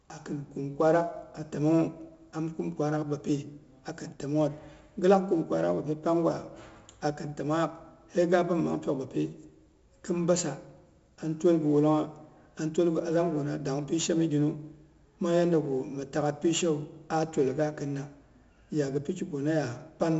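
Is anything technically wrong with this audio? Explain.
Yes, the speech carries coding damage throughout. 4-bit ADPCM compression: each sample is coded as a coarse step from a prediction, so heavy error noise rides on every loud syllable as gritty hiss, with harsh attacks. A spectrogram shows broadband grain tracking the speech and nothing above 7.7 kHz, which points to a low sample rate around 16 kHz and roughly 64 kbps.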